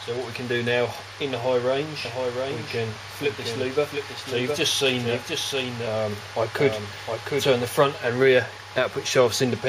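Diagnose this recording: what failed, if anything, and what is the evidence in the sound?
Doubled audio track, 2.05–7.65 s: a full-band copy trails by roughly 0.7 s, about 5 dB quieter, cutting in and out abruptly. Its likely source is a slower duplicate capture path.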